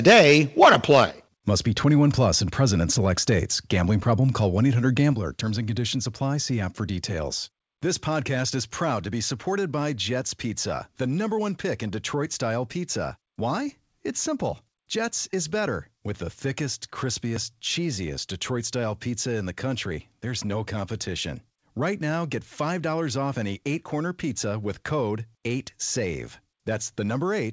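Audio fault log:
0.62–1.03 s, microphone overload: The microphone input level was likely set too high, so the loudest peaks drove the converter past its ceiling by about 5 dB and their tops were sheared flat. Around one sample in twenty in this stretch is clipped, enough to give these syllables a harsh, crackling, buzzy edge. The squared-off waveform adds new harmonics that ride on top of the speech.
1.11 s and 5.13 s, microphone volume stepped down: The call software likely reacted to the overload by lowering the device's input gain in single jumps, first by about 6 dB just after the distorted peak and again by about 5 dB four seconds later. Each change is instant, with no fade, so the speech and the room noise behind it drop together in one audible step, and the clip sounds noticeably quieter after each point.
17.36 s, audio missing between chunks: Right after "the thickest", the recording likely lost a short slice, about 20 ms, while one processing block closed and the next opened, which fits a recorder working in 6-second chunks. 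The two edges are butted together with no silence in between, so the sound jumps forward with a tiny skip.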